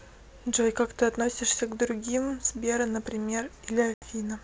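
At 3.94 s, packet loss on an ADPCM call leaves an 80 ms silent gap, flat in the waveform and a blank vertical stripe on a spectrogram. The decoder's predictor and step size fall out of step, so speech resumes at 4.04 s with brief distortion.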